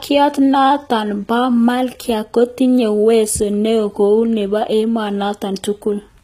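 Throughout, the treble is bright but synthetic, with gritty, lispy s sounds and nothing above 14.9 kHz, likely HE-AAC compression at a very low bitrate: its band replication sounds metallic, where a plain low-pass would sound dull.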